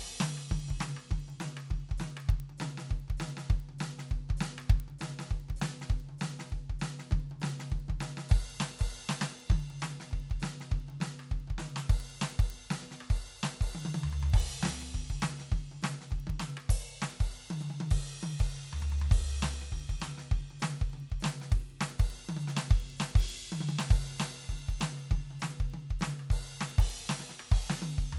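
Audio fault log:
throughout, resampler restarted on every block: each 100 ms block was upsampled from 24 kHz to 48 kHz without its neighbours, so ticks recur at 10 Hz under the music.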